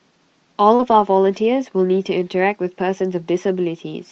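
At 0.75 s a short concealed packet loss begins and runs to 0.81 s. About 40 ms of audio never arrived, and the receiver covered roughly 37 ms of it by extending the preceding sound, continuing its pitch where voiced or substituting shaped noise where not, before crossfading back. It is heard as a brief smear or wobble in the speech. On a spectrogram the harmonics go flat and repetitive across that strip, and the waveform shows a suspiciously regular, slightly decaying stretch.

Overlapping it, from 0.79 s to 1.01 s, comes a lost packet rebuilt from error correction. Several separate losses over about 120 ms, which fits six 20 ms frames, were replaced by the low-bitrate backup copies Opus carries in the following packets. Nothing drops out, but these stretches sound grainier and noisier than the 32 kbps Opus stream around them. A spectrogram shows blurrier harmonics and more diffuse noise between them in those frames, all beneath the 8 kHz ceiling of the call path.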